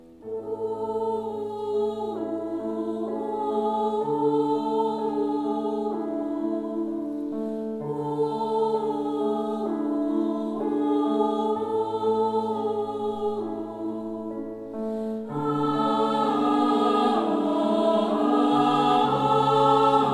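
Nothing goes wrong anywhere in this audio, with no technical faults to point to at any moment.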